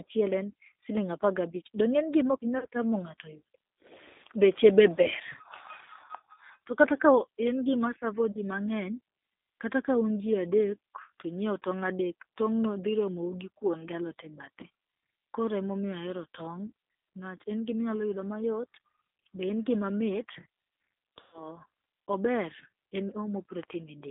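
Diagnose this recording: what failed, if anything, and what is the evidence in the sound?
Codec stage: the call passed through the G.729 codec at 8 kbit/s, leaving the speech confined to about 250 Hz to 3.7 kHz, audibly rough and synthetic throughout.

Network stage: VoIP packet loss concealed by the speech codec at 2.59 s after "donge inge", 6.06 s, 8.32 s after "en gima", and 21.21 to 21.47 s. The decoder extended its last frame into a fading buzzy tone or coloured noise, with a longer gap of about 120 ms at the end.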